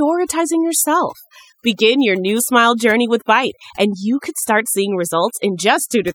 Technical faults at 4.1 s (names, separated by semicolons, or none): overdone noise removal